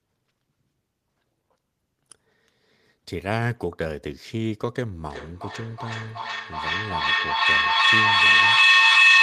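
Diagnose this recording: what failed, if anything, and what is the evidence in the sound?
An acoustic loop formed between two devices in the same room on one call, and the call processing's echo cancellation did not break it. From 5.09 s a feedback howl builds and runs to the end, with repeats that grow rather than fade. Each pass through microphone, loudspeaker and room adds gain, so the sound narrows to a tone around 3 kHz where the loop favours it, pulsing roughly every 400 ms and peaking about 12 dB above the speech.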